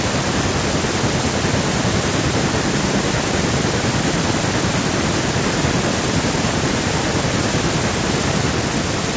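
From 4.28 s to 8.19 s there is feedback echo between two devices: a second device in the room replays the call, and the microphone picks it up again, beyond its echo canceller's reach. The speech returns roughly every 0.4 s, thin and ringing, at about 20 dB below the speech.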